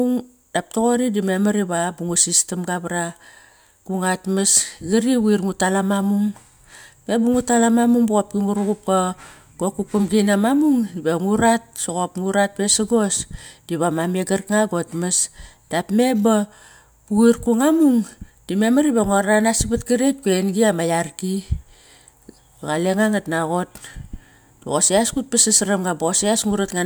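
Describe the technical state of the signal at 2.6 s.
At 2.6 s the speech signal is intact, with no audible dropout, distortion, glitch or other fault at that moment.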